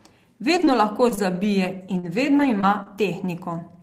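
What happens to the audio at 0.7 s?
Around 0.7 s, the speech has just gone through two short concealed packet losses, from 0.57 to 0.61 s and from 0.65 to 0.69 s. Each gap lasts about 20 ms, which points to a single lost packet. The receiver covered the hole by extending the last bit of sound, keeping its pitch if voiced or using shaped noise if not. It then crossfaded back into the real signal. It filled about 12 ms in the first gap and 20 ms in the second. Each one sounds like a brief smear or wobble, and a short consonant can drop out.

Overlapping the end of each gap, from 0.59 to 0.61 s and from 0.67 to 0.69 s, comes a lost packet rebuilt from error correction. The following packet carried a low-bitrate backup copy, and the decoder played that copy. That fills 20 ms without silence. Those frames are coarser and noisier. Any high-frequency content briefly thins, because the backup lacks it and the decoder only estimates it.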